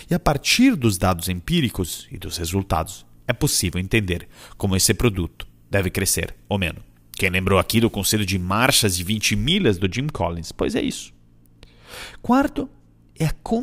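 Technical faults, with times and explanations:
0.00–9.54 s, pre-emphasis left on: a treble boost matching the 50 µs FM curve was never de-emphasised, lifting 10 kHz about 10 dB, so the speech sounds thin, bright and sibilant.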